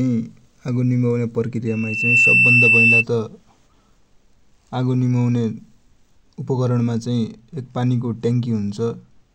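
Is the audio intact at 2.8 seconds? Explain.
No. At 2.8 seconds the speech is joined by loudspeaker feedback squeal, which runs from 1.67 to 3.04 s. The microphone is picking up the loudspeaker it feeds, and at 2.7 kHz the loop gain tops one, so that tone swells over about half a second into a piercing squeal roughly 10 dB above the speech. A spectrogram shows a bright horizontal line at 2.7 kHz, and the waveform swells into a dense, steady oscillation.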